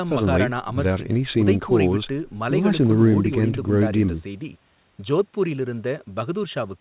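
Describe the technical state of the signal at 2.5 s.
At 2.5 s the speech is intact, with no dropout, click or distortion, only the narrowband sound of the call path, which carries nothing above 4 kHz.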